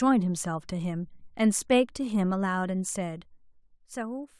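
No technical faults are audible.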